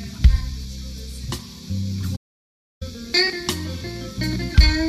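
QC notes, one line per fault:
2.16–2.82 s, playback stall: the audio stops mid-flow and the output stays silent for about 0.65 s before sound returns. The likely cause is the player running short of data or its thread being blocked, so nothing reached the output until it recovered. Unlike a brief dropout or click, which lasts only milliseconds, this is a sustained silence that interrupts the flow.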